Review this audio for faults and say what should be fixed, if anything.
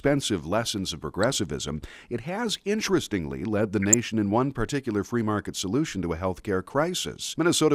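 DAB burbling appears three times in this speech. It is heard at 1.18 to 1.33 s after "lessons of", at 3.82 to 3.94 s between "has interestingly led the" and "in one particular free", and at 6.70 to 6.73 s after "solution to a healthcare". Weak reception let bit errors slip past error correction into the MP2 data. Corrupted samples put short blips of noise in individual sub-bands. Better antenna placement or a stronger multiplex signal would prevent it.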